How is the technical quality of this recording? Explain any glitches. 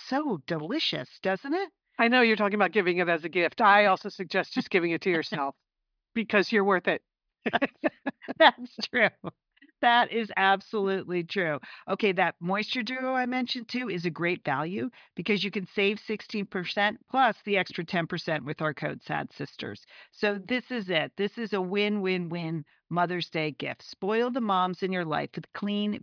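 No glitches or technical faults are audible anywhere in the recording.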